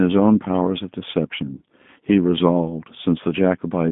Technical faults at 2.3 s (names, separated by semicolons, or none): G.729 codec